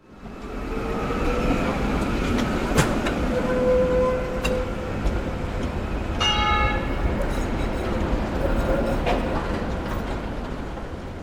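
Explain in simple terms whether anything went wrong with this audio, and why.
Something in the recording chain likely handled the audio in blocks of 3 seconds and lost a tiny sliver, about a fiftieth of a second, each time it switched from one block to the next. This is called audio missing between chunks. The two sides are joined with no gap, so the sound briefly skips forward at 1.27, 4.25, 7.23 and 10.21 seconds, a small hiccup every 3 seconds.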